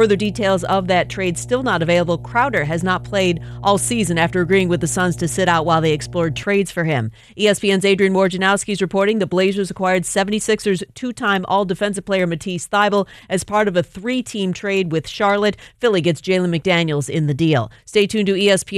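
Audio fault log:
0.00–6.43 s, mains hum. A steady low tone sits under the speech from the very start. It is pitched at 60 Hz, with some low harmonics above it. It is fairly prominent, roughly 15 dB below the speech, so it is easy to hear in pauses. Power-line current is leaking into the signal, as a ground loop or a nearby transformer would cause. The tone stops at 6.43 s.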